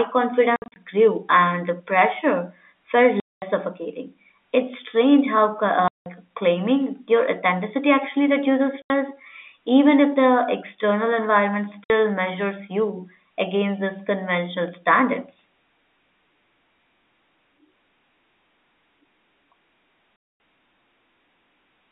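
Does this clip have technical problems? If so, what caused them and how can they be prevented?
Yes. The sound drops abruptly into dead silence six times: a scattered cluster from 0.56 to 0.76 s just before "grew and the pressure", then 3.2 to 3.42 s after "and the pressure felt", 5.88 to 6.06 s, 8.82 to 8.9 s, 11.84 to 11.9 s between "if the external environment" and "measures you against these", and 20.16 to 20.4 s. This is packet loss filled with silence. The gap lengths step in 20 ms units, which fits 20 ms packets going missing, and the receiver inserted zeros in their place. The telephone band, roughly 250 Hz to 3.5 kHz from G.711 coding, surrounds these gaps. Prevention: use packet loss concealment at the receiver, along with an adaptive jitter buffer and forward error correction on the link.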